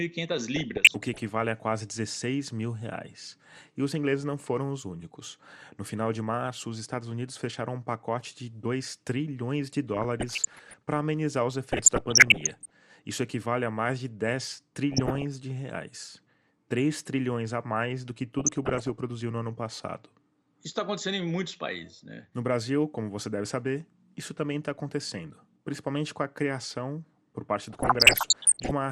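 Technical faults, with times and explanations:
Throughout, MP2 compression: The speech sounds dull, with a gurgling, grainy edge that is plainly audible. The likely cause is a low-rate MPEG Layer II stream of around 80 kbps. Upper sub-bands drop out, and the remaining bands are coarsely quantised.
0.56–1.29 s (just before "a quase"), 9.94–10.74 s (between "trilhões de" and "para amenizar os"), 11.72–12.70 s, 14.92–15.24 s, 18.39–18.90 s and 27.70–28.71 s (after "a criação por parte"), DAB burbling: Short noise blips in single sub-bands sit over the speech. Bit errors slip past error correction and corrupt samples and scale factors. Single sub-bands then jump in level for up to a frame. The final burst is the heaviest.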